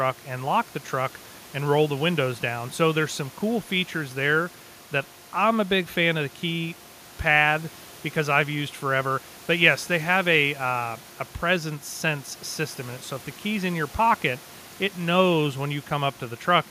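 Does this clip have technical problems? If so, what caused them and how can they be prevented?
No, the speech shows no technical faults, with only the room's own background noise sitting about 21 dB beneath it.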